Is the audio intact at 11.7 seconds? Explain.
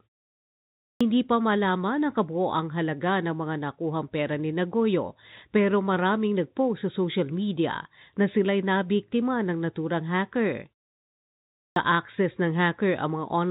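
No. At 11.70 s the speech resumes with a clipped start after a pause. About 62 ms of sound is lost, up to 11.76 s. The pause before it lasts about 1 s. During that silence the output device drops into a low-power state. When the speech returns, the device has to wake and lock onto the stream again. The opening of the next sound is swallowed in that time. So the speech jumps in abruptly, missing its first sounds.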